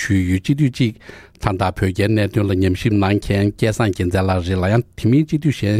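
No technical faults are audible anywhere in the audio.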